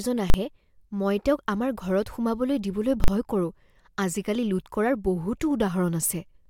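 At 0.30 to 0.34 s and 3.04 to 3.08 s, invalid numbers at full scale pin the speech at one extreme value for 40 ms, heard as single bangs: flat-topped waveform slabs, full-height spectrogram columns.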